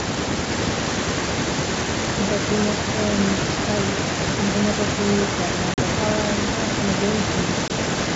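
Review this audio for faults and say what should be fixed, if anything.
Speech suppressed in double talk, 0 to 0.47 s: the speech dips by up to about 30 dB for roughly 0.4 s. The likely cause is an echo canceller that cannot tell the near talker from loudspeaker echo while both sides speak, so it attenuates everything and takes the wanted speech down with the echo. Tuning the canceller's double-talk detector so it holds adaptation instead of suppressing would prevent this.

Echo leak, 0.53 s to the end: a delayed copy of the speech trails the original by about 0.87 s, sitting roughly 10 dB below it. That long, steady lag likely comes from a far end on loudspeaker whose echo canceller leaves part of the microphone pickup in place and sends it back down the line. Giving the far-end canceller a tail long enough for that delay, or using a headset there, would prevent it.

Packet loss on an ADPCM call at 5.74 to 5.79 s and 7.68 to 7.72 s: the first hole lasts 40 ms, about two packets' worth, and the second lasts 20 ms, about one. 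Each gap is hard-edged silence, and the speech comes back slightly distorted. This happens because the decoder's adaptive predictor and step size lost track of the sender's and need some tens of milliseconds to settle. The G.722 wideband coding itself stays clean, with full bandwidth up to 7 kHz. A jitter buffer with packet-loss concealment that re-syncs the ADPCM state would prevent these glitches.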